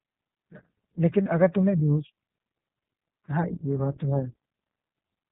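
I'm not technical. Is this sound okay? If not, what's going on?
No, not quite. The whole clip runs through the iLBC codec, an internet-calling format that drops the higher frequencies, so the speech sounds muffled, slightly rough and a bit synthetic. Then, from about 1.22 to 1.27 s, there are lost iLBC frames: a few hundredths of a second of sound went missing, and the player covered the gap by briefly holding a buzzy, breathy tone before normal speech resumed.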